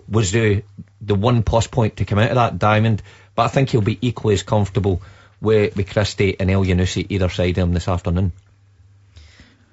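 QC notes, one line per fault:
Throughout, low-delay AAC compression: the speech sounds rough and grainy, with a hiss filling the gaps between harmonics and a thin, artificial top end, likely from AAC-ELD at around 32 kbps, whose short frames resolve pitch poorly and starve the bit budget.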